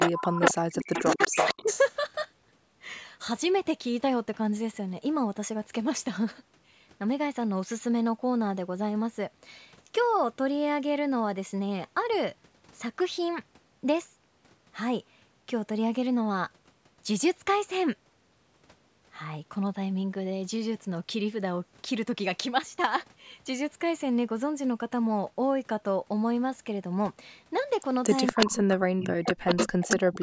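A speech recording whose opening and closing seconds carry an echo leak: a second copy of the speech trails the original by about 236 ms, roughly as loud as the speech itself, at 0.00–0.12 s, 0.44–0.54 s, 0.93–1.79 s, 28.04–28.54 s and 29.00–30.22 s. The likely cause is a loudspeaker at the far end whose echo canceller let its own microphone pick-up slip back into the call. What sets this apart from room reverberation is the fixed, distinct lag and the near-equal level. Overlapping those same stretches is speech suppressed in double talk. Between 0.09 and 1.71 s (about a second in all), at 28.32–28.79 s (about 0.4 s), and from 29.20 s to the end (about 0.7 s), the speech sinks by as much as about 40 dB or breaks into fragments. This is most likely the echo canceller clamping down on both sides while they talked at once. Unlike the leak, which adds a duplicate, this fault takes sound away, leaving gaps and sudden dips rather than a repeat.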